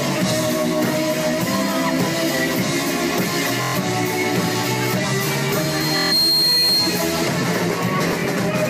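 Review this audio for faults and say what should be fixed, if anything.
A buzzy machine-gun repeat at 3.62–3.76 s, 5.97–6.13 s and 8.08–8.28 s is Bluetooth stutter. Late or lost packets made the receiver replay its last buffer, losing about 120 ms and 140 ms in the first two events. The last event is scattered, with runs up to about 23 ms. Keeping the Bluetooth link short and unobstructed, or using a wired connection, would prevent the dropouts.

A single 4.2 kHz tone swells over roughly 0.7 s from 5.54 s and holds until 7.19 s, at about 5 dB above the sound. This is loudspeaker feedback squeal: the microphone picked up its own loudspeaker and the loop gain exceeded one at that frequency. Lowering monitor gain, moving the microphone away from the loudspeaker, or notching 4.2 kHz would stop it.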